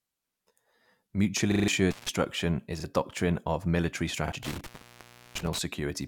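A speech clip with two kinds of dropout. A repeated buffer occurs at 1.52–1.68 s, where a 40 ms piece plays four extra times and roughly 150 ms of audio is lost, and again at 2.80–2.84 s, just before "a doctrine of military", and 4.28–4.32 s, just after it, each with a single repeat. On a waveform these show as identical 40 ms blocks placed side by side with hard joins, which is what happens when fresh audio misses its deadline. An intermittent contact, likely a loose cable or plug, cuts the signal at 1.91–2.09 s for 142 ms just before "is a doctrine of", and at 4.43–5.59 s for 691 ms. The spectrogram shows the speech energy collapsing to a faint hiss floor, with broadband vertical crackle streaks at each edge.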